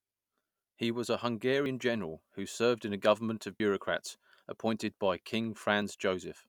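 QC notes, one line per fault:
1.66 s, 3.6 s, 5.82 s: dropped buffer (overrun). Each is a jump with the speech skipping ahead and no gap, about 40 ms missing at the first two and roughly half that at the third. A buffer was likely overwritten before capture read it.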